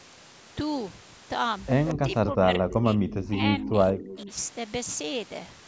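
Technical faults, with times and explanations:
1.86–2.14 s, 2.70–2.74 s, 3.08–3.28 s, 3.63–3.68 s and 4.05–4.20 s, echo leak: you get faint delayed scraps of the speech trailing it by 183 ms, about 10 dB down in the first burst and fading to about 15 and then 20 dB below in the later ones. The likely story is a loudspeaker on the far end whose echo canceller missed part of what its mic heard, so that leftover got sent straight back.
1.92–3.41 s, 3.63–3.76 s and 3.92–4.29 s, speech suppressed in double talk: the speech sinks in level while both sides are talking at once, at worst about 15 dB down in the first two spans and about 10 dB in the last. Added up it's roughly a second and a half of dipped audio, most of it in the long first stretch. Likely cause is the canceller failing to tell the local talker from the echo during overlap and turning both down.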